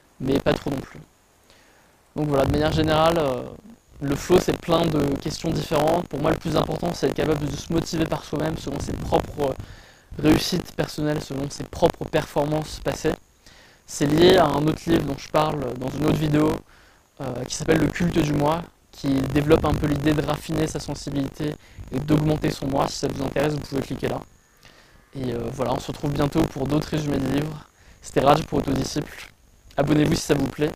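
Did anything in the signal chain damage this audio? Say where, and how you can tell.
Yes. Buffer tearing runs through the whole clip at the driver or buffer stage. A steady 50 Hz rattle rides on the sound whenever signal is present and vanishes in the gaps, which fits a 20 ms period. The writer and the hardware reader have slipped out of step, so in every period roughly a sixth of the block replays material from around 40 ms earlier, with a hard splice at each edge producing the buzz.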